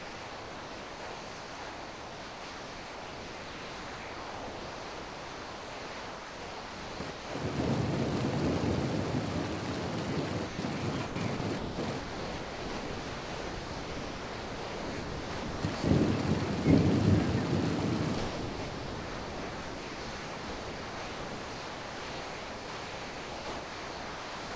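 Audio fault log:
0.00–7.35 s: sound chopped by the voice detector. About 7.2 s becomes comfort noise. The sound has repeated holes, likely from repeated detector switching.
10.47–10.59 s: sound dropped by the voice detector. A 120 ms piece is lost to steady comfort noise. The sending detector likely mistook it for background.
11.07–15.84 s: sound chopped by the voice detector. About 4.05 s is replaced by comfort noise. It is choppy, likely because the detector kept toggling.
18.18–24.55 s: sound dropped by the voice detector. The last 6.39 s gives way to steady comfort noise. The detector likely treated the sound as background and stopped sending.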